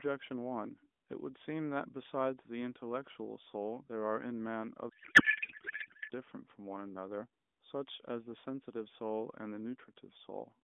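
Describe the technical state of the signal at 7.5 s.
At 7.5 s the audio is intact, with no fault in the signal, only the narrow band of the AMR narrowband mobile codec it passes through.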